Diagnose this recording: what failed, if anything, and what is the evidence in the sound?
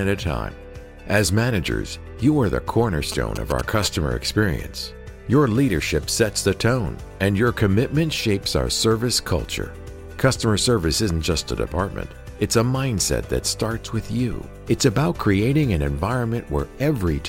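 GSM signalling bursts were picked up in the analogue wiring. From 3.12 to 3.85 s there is a galloping pattern of short buzzes at 217 Hz, roughly 10 dB below the sound. A nearby phone's radio bursts were rectified by the audio circuit.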